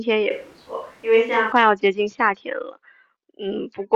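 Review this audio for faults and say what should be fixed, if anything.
From 0.31 s to 1.52 s the speech abruptly turns roomy and hollow, with thinner bass, a level drop of about 5 dB and room noise rising to roughly 35 dB below the speech, then snaps back. This is likely a switch to a distant microphone after the close mic dropped out. Added reverb or a low-cut filter would not raise the background noise or change level and tone at hard edges. To prevent it, monitor and secure the close mic's connection during recording.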